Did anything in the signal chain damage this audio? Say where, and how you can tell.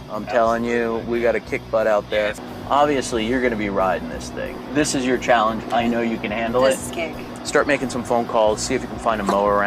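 No, nothing in the signal chain damaged this audio.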